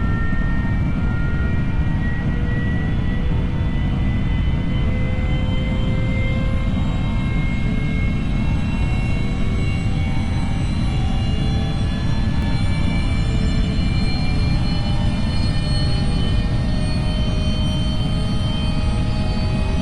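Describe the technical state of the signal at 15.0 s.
At 15.0 s the signal carries a doubled audio track, running from 12.42 s to 16.40 s. A second full-band copy of the same sound trails the original by around 150 ms, roughly 5 dB quieter. It is most likely a second capture through a slower path or two out-of-step copies left in an edit. Every event is followed by a dry, uncoloured repeat with no decay, and the doubling begins and ends abruptly.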